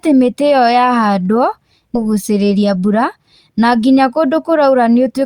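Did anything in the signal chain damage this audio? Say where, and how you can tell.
Yes. At 1.95 to 1.97 s, a skip ahead in the network or jitter buffer drops about a second of speech and joins the two sides with no fill. The waveform shows an abrupt envelope splice, and spectrogram formant tracks break discontinuously.

From 2.55 to 3.00 s, a jitter buffer speed-up plays the speech at 112% speed with unchanged pitch, trimming around 70 ms to shed excess delay. It sounds hurried. Syllables look compressed on the waveform, with harmonic spacing unchanged on the spectrogram.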